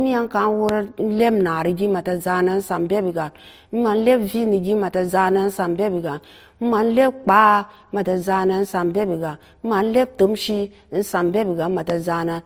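Throughout the speech, transcoding between lossy codecs is audible: two layers of compression artefacts sit on top of each other, with content ending at 20.2 kHz. The mixed smearing likely comes from an MP3 encode at around 60 kbit/s re-encoded to Opus at about 32 kbit/s.

A loud pop occurs at 0.69 to 0.71 s and again at 11.90 to 11.92 s. Each is a single sharp transient peaking about 15 dB above the speech, which continues underneath. The cause is likely a brief voltage step, such as from a switch, static discharge or a driver glitch.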